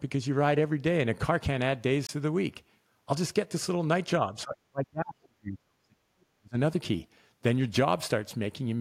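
Speech, with two technical faults. At 2.07 to 2.09 s the playback path likely failed to deliver a block of samples in time, leaving a block of digital silence about 23 ms long, which fits a 1024-sample buffer. The audio drops straight to silence and returns without any fade, and the gap itself registers as a brief hole. From 4.33 to 6.08 s and again from 6.34 to 6.56 s, the speech sinks by as much as roughly 40 dB, fading and breaking up for about a second and a half in the first stretch and around a fifth of a second in the second. This is likely speech suppressed in double talk: with both ends talking at the same moment, the echo canceller could not tell the local talker apart from the returning loudspeaker echo, so it attenuated everything. The result is a voice that thins, dips and drops out in fragments.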